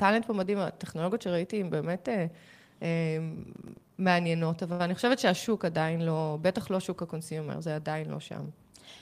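From 3.56 to 3.91 s, processor overload crackle: missed buffers of a few milliseconds leave silent gaps, heard as gritty tearing and seen as vertical broadband streaks and notches.

At 4.72 to 4.81 s, a short stall from a late packet: the speech is held for 74 ms, showing as flat, smeared spectrogram bands, then resumes with nothing lost.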